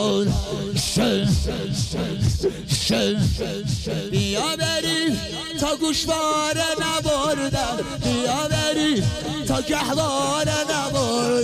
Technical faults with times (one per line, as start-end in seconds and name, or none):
none